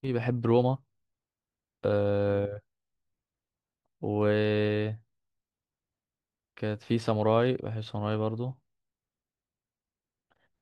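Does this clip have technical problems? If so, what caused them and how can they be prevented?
No, nothing in this one needs fixing, and there's nothing to prevent since no technical problems turn up anywhere in the speech.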